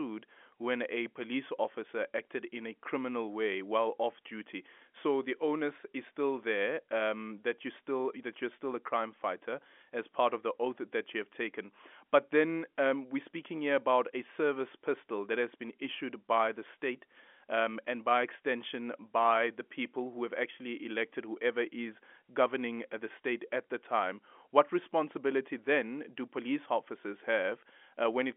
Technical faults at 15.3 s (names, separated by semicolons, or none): none